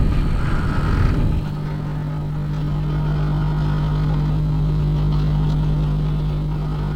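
A recording of everyday sounds that hits a time-stretched section from 1.67 s right through to the end. The pace suddenly drops to about 0.55x while pitch holds steady, so everything drags, likely from software padding the audio out by repeating short slices.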